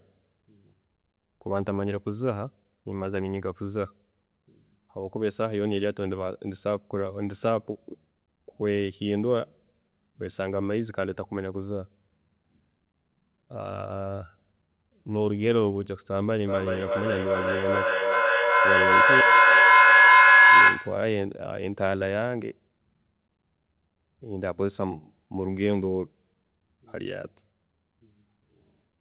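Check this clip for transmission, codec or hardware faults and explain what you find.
One transmission fault stands out: a feedback howl from 16.47 s to 21.11 s, heard over audio already band-limited to below 4 kHz, as a narrowband call codec such as G.711 would leave it.

Feedback howl, 16.47–21.11 s: two devices on the same call share a room, so each pass from loudspeaker back into microphone returns louder. The repeats narrow onto a tone near 1.5 kHz, recurring roughly every 400 ms, and peak about 12 dB above the speech. A spectrogram shows a bright horizontal line thickening at that frequency, and the waveform's envelope swells.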